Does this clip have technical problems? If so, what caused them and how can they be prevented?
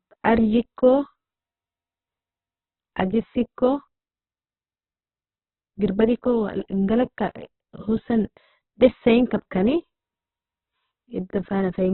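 Yes. Opus compression damage runs through the whole speech clip: nothing is heard above about 4.1 kHz, and the voice sounds boxed-in, rough and grainy rather than swirly. This is likely an Opus encode in its CELT music mode at a very low rate, around 8 kbps. With so few bits, the encoder keeps each band's overall energy but fills the detail with folded or noise-like content, and narrows the bandwidth. To prevent it, encode speech at 24 kbps or more in Opus's voice setting, or keep an uncompressed master.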